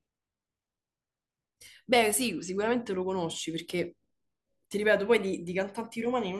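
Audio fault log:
Nothing to log here, as no faults turn up anywhere in the speech.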